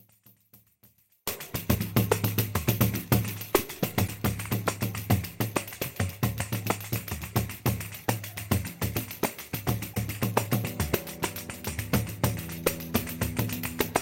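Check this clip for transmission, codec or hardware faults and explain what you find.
Two faults are audible: a near-total loss of level at the start, and three short glitches from corrupted compressed data.

One channel inverted, from 0.0 to 1.27 s: the sound drops by about 34 dB to a faint residue. This is likely because one stereo channel has reversed polarity, so the shared content cancels when the channels are summed to mono, leaving only their small differences.

Damaged data in a compressed stream, at 1.71 to 1.76 s, 4.04 to 4.09 s and 9.92 to 9.97 s: each is a brief glitch lasting about 45 to 55 ms. Corrupted frames are misread by the decoder, which loses sync and hunts for the next valid frame header.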